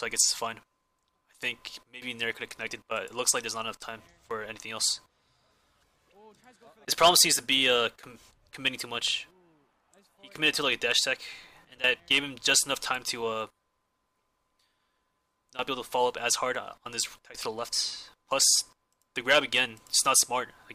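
At 18.44 s there is a repeated buffer. Fresh audio failed to reach the output in time, so the device replayed the block it had just played. Each repeated piece lasts about 1.45 ms, which fits a 64-sample buffer. The same tiny segment sounds three times, with a hard join at each repeat. Because the block is so short, it comes across as a brief click or buzz rather than a stutter, and a few milliseconds of the sound are lost.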